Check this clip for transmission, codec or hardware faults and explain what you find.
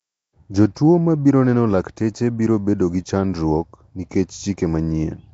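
There's one codec fault, and it runs through the whole recording. The speech has a rough, hissy halo and a smeared, underwater quality, with nothing above 7.8 kHz. That's likely Nellymoser compression, the old Flash microphone codec. It codes short blocks at a fixed two bits a sample, gives no bits to weaker bands and fills them with noise instead. That invented noise makes the hiss, and the coarse block coding makes the smear. The damage is plainly audible and fits a 32 kbps stream.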